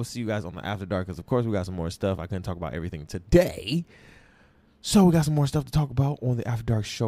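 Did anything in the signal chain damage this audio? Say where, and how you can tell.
No, nothing in the signal chain has left a mark on this speech recording. I can hear no damage at any stage, from the wiring and converter through to playback.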